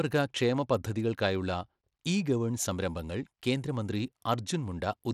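Throughout, the speech is cut above 16.9 kHz, with gritty, flickering treble rather than MP3-style swirl, likely Bluetooth SBC compression at a bitrate near 96 kbps.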